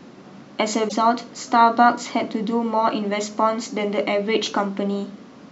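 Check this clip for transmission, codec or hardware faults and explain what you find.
There's one fault, near the start of the speech. From about 0.85 to 0.93 s there's damaged data in the compressed stream: a stretch of bytes was corrupted, so the decoder misread those frames, lost sync and hunted for the next good header. You hear it as a short blip.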